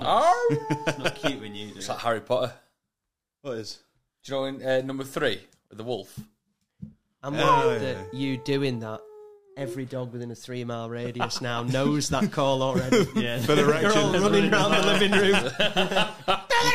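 No technical faults can be heard anywhere in the recording. Nothing in it calls for a time mark or a note.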